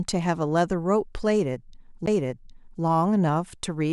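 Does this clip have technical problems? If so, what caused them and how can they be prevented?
Yes. A CD skip at 2.06 s: the laser jumped tracks, giving a tick, a very brief mute, then speech resuming elsewhere, unlike a dropout, which continues where it paused. Isolate the player from knocks and use clean, unscratched discs.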